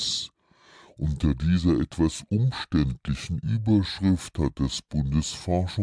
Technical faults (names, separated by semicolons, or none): wrong sample rate